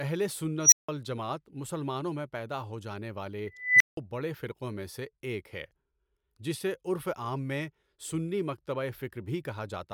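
At 0.63 s and 3.47 s, an unstable filter runs away. A recursive stage with bad coefficients swells a tone near 5 kHz over 95 ms, then near 2 kHz over 337 ms, into clipping. Unlike feedback howl, each ends in overflow silence of 165 and 170 ms.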